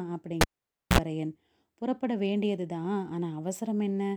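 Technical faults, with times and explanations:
0.41 to 0.99 s, cable pulled and plugged in: the speech drops out with a pop and sits near silent for about 0.52 s, then you get a 53 ms burst of 60 Hz mains buzz as the plug's tip touches first, and another pop when the signal comes back.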